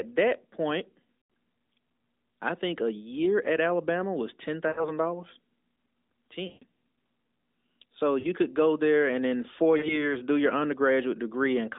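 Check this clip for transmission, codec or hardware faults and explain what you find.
Yes, there are dropouts: lost AMR speech frames at 1.18, 4.68 (after "was ten"), 6.48, 8.20 (before "could go there and") and 9.78 s (between "there and in four" and "do your"), each lasting roughly 0.07 to 0.35 s. Corrupted frames failed their checks, so the decoder stretched the last good frame while fading it, giving smeared, dipping sound that comes back rough. The narrowband band-limiting fits AMR-NB at 12.2 kbps.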